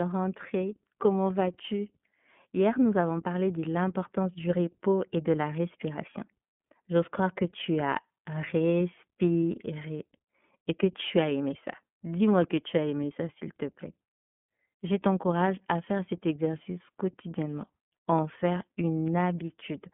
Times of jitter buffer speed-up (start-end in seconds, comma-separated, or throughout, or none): none